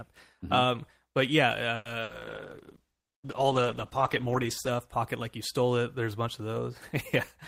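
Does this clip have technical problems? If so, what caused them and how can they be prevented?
Yes, there are three separate problems, all bunched into the first five seconds of this speech clip.

At 1.75 s to 1.88 s there's a short call audio freeze. The last bit of speech gets stretched into a fading buzz or hiss for about 100 ms, then the talker picks up right where they left off, so nothing is actually lost. It just shifts everything about 100 ms later. The likely cause is packets getting held up in transit long enough for the jitter buffer to run dry. A jitter buffer that adapts a bit more generously, plus less congestion on the link, would keep this from happening.

Right after, from 2.03 s to 2.12 s, comes a burst of packet loss. This time a chunk of speech really is gone. Roughly 60 ms didn't arrive in time, and the receiver covered it with about 60 ms of the previous sound tapering off, so you hear a brief fading buzz or hiss and then the speech jumps ahead past the missing part. 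In-band FEC or a little redundancy on the stream would cover short gaps like this.

Then from 2.13 s to 4.81 s there's a call bitrate drop, starting just before "pocket like you stole". The encoder went from 32 kbps down to 13 kbps and stayed at that floor for about 2.6 s. At that rate Opus has to code coarsely and trim the top end, so the speech turns muffled and a bit watery until the rate climbs back. Smoother bandwidth estimation and a sensible minimum bitrate would soften this.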